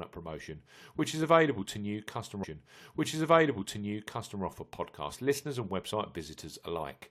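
A stream segment was repeated in this speech recording: the player queued the same chunk twice, so from 2.43 to 4.42 s about 2.0 s of speech replays after a small blip at the jump back.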